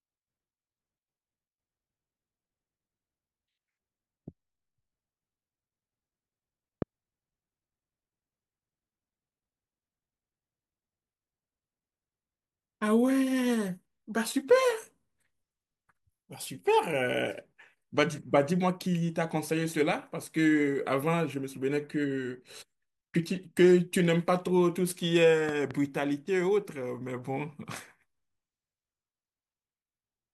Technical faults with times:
6.82-6.84 loud pop
25.49-25.73 loud pop

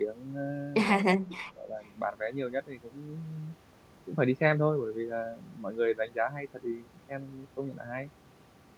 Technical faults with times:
1.18-1.73 speech suppressed in double talk
1.83-1.88 echo leak

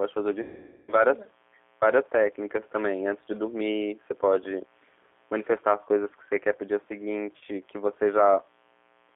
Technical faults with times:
0.00-9.16 mains buzz
0.00-9.16 G.729 codec
0.42-0.94 VoIP packet loss concealed by the speech codec
7.37-7.43 VoIP packet loss concealed by the speech codec

